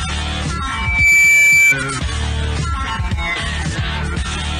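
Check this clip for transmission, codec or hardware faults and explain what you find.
One fault: loudspeaker feedback squeal from 0.66 to 1.75 s. A microphone is hearing its own loudspeaker, and at 2.3 kHz the loop gain exceeds one, so that tone swells over a few tenths of a second to roughly 10 dB above the sound. Unlike steady interference tones, it builds by itself.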